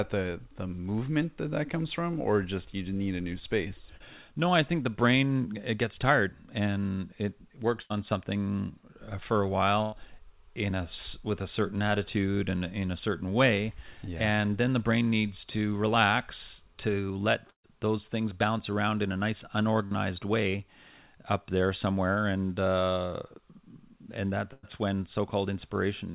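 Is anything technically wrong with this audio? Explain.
Yes. At 3.96 to 4.02 s a brief smear covers about 40 ms: short concealed packet loss, where the receiver extended the preceding sound to fill a late packet.

At 7.82, 9.82, 17.50, 19.86 and 24.53 s the sound stretches into a held buzz or fading hiss, then resumes further on. This is burst packet loss: 80, 100, 140, 60 and 100 ms went missing and were filled by continuing and fading the last sound. At 17.50 s the fill dies to silence for about 100 ms. Throughout, nothing is heard above 4 kHz, which fits a G.711 mu-law call path.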